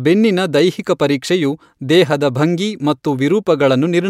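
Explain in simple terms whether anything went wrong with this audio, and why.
Nothing went wrong here: the recorded speech comes through steady and intact, with no technical problems to be heard anywhere in the audio.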